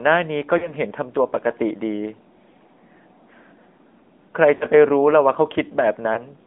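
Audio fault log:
Throughout, AMR narrowband mobile codec: speech sounds buzzy and synthetic, held to a band of roughly 200 Hz to 3.6 kHz. The sound points to an AMR-NB link at about 10.2 kbps, where a pulse-driven vocal tract model rebuilds the voice, with plainly audible coding damage.
0.58 to 0.73 s, 4.56 to 4.65 s and 6.14 to 6.19 s, lost AMR speech frames: the sound dips into a brief smeared warble, then returns rough for a moment. Corrupted frames were replaced by repeating the last good pitch and vocal tract settings at falling gain, covering about 40 ms, 40 ms and 20 ms.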